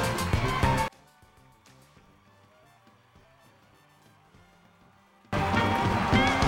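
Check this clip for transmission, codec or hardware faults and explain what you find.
One fault stands out. From 0.88 to 5.33 s the sound drops about 33 dB to a faint residue, likely one channel inverted, cancelling shared content when summed to mono.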